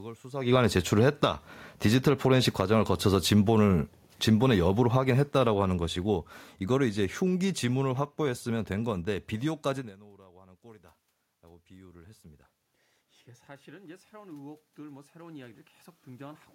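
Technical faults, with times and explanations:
0.42–9.63 s, automatic gain falling: just after the talker comes closer near 0.5 s, the level sinks gradually by about 12 dB over nine seconds. The room noise sinks along with the speech, which marks it as gain control turning down rather than the talker moving away.
10.16–12.52 s and 13.65–16.48 s, automatic gain rising: after the input drops by about 22 dB around 10.0 s as the talker moves back, the gain climbs slowly, by about 4 dB and then about 5 dB. Speech and background noise swell together, unlike a talker simply leaning in.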